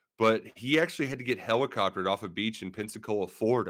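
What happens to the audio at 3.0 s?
Just before 3.0 s, from 2.77 to 2.95 s, right after "helicoptered off a beach", the speech turns rougher and noisier without any dropout. This is a lost packet rebuilt from error correction. Several packets went missing, which fits about five packets covering roughly 100 ms of rebuilt audio. Each following packet carried a low-bitrate copy of the lost one, and the decoder played those copies, so the gap is filled with coarser sound.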